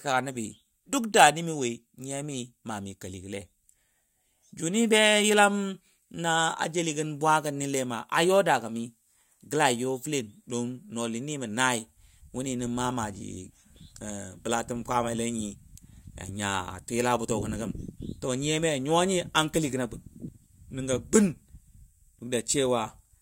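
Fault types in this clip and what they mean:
Nothing stood out on listening to the speech here.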